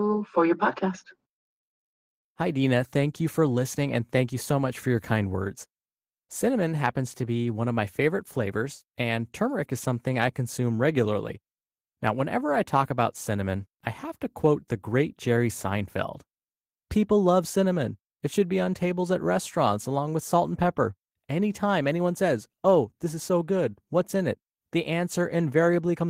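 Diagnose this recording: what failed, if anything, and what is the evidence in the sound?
Nothing failed; the speech shows no audible faults.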